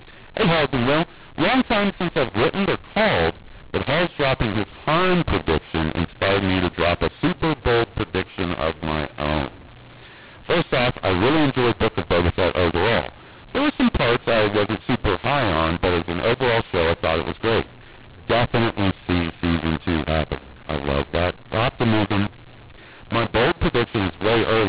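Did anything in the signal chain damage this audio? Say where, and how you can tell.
Yes. A mu-law and A-law mix-up runs through the whole clip at the codec decode stage: the G.711 A-law stream is being expanded with the mu-law curve, so sample levels are remapped wrongly, speech turns harsh and gritty, and pauses fill with hiss instead of silence.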